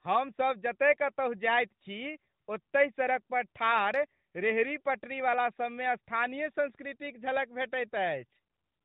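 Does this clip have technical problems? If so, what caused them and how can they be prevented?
No, nothing in this speech stood out as a technical problem on listening, so there is nothing here that needs preventing.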